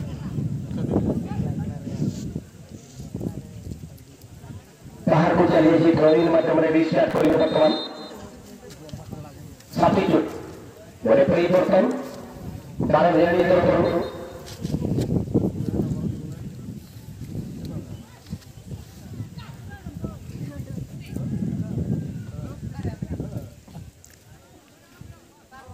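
From 7.10 to 7.34 s the processor falls behind its audio deadlines again and again, dropping a run of short buffers, around 3 ms each, leaving gaps instead of sound. This processor overload crackle is heard as gritty tearing that stops cleanly afterwards.

Between 13.40 and 14.98 s a second copy is mixed in, likely from a slower capture path feeding the same signal. This doubled audio track trails by about 150 ms, roughly 5 dB quieter, a dry full-band slapback that appears and vanishes abruptly.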